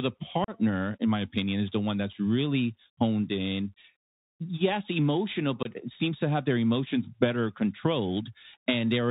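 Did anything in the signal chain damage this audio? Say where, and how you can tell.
Yes. The damage sits in the codec stage. The whole clip is band-limited speech with nothing above 4 kHz. It sounds like a Bluetooth CVSD headset codec, and it fits a 64 kbit/s CVSD link. CVSD sends one bit per sample, saying only up or down, and the step size adapts. Fast, loud high content outruns that step and distorts. S sounds turn scratchy, and a granular hiss sits under the speech. The damage is plainly audible throughout.

The second fault is on the wireless link: unconcealed Bluetooth headset packet loss. The first hole runs from 0.44 to 0.50 s, just before "in my opinion is". About 37.5 ms of audio is missing there, which fits a handful of lost packets. The second runs from 5.63 to 5.67 s, just before "seems to have their", with about 22.5 ms gone. Nothing fills these gaps. Silence or an idle pattern replaces the speech, so the edges are abrupt. 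The speech returns briefly quieter, as the CVSD decoder rebuilds its step size.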